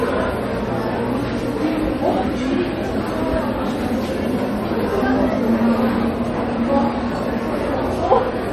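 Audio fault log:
Throughout: MP3 compression, likely at a low bitrate near 40 kbps. Nothing survives above 14.9 kHz, a flat ceiling on a spectrogram, and weak bands flicker on and off frame to frame as scattered holes, giving a watery, swirly texture and smeared attacks.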